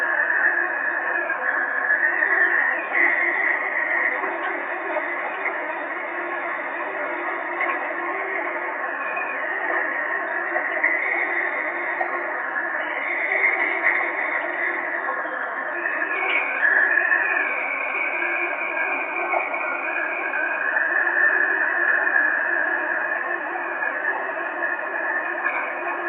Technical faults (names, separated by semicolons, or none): none